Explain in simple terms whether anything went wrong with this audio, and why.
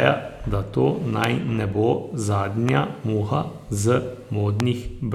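Three loud pops interrupt the speech: one from 1.24 to 1.26 s, between "da to" and "ne bo", another from 2.69 to 2.71 s, and a third from 4.60 to 4.62 s. Each is a single sharp thump, very brief and much louder than the voice. The cause is likely a sudden jolt of electricity, such as static or a switch. Unlike a dropout, the speech keeps going underneath each pop instead of vanishing.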